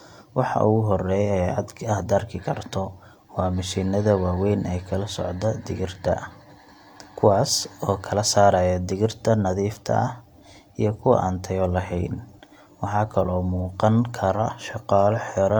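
Listening through this speech recording, nothing stood out as a technical problem at any point.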